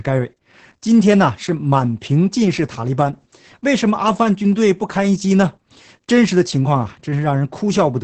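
Opus voice compression runs throughout: SILK coding removes everything above 8.7 kHz, and coarse excitation, consistent with 10 kbps, leaves the speech muffled, hoarse and robotic.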